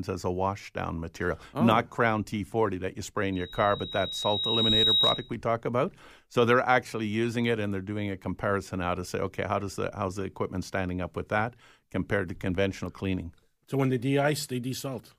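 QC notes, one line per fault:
3.32–5.33 s, loudspeaker feedback squeal: after "that you spray" a 3.8 kHz tone swells over about a second and a half to around 5 dB above the speech, ending before "talk about". The microphone is re-amplifying its own loudspeaker, and that self-building swell distinguishes it from a steady whine.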